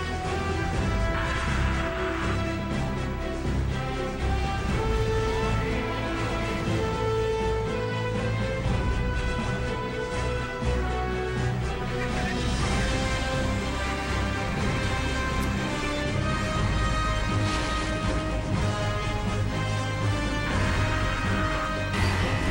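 No faults detected across the recording; nothing in the signal path needs attention.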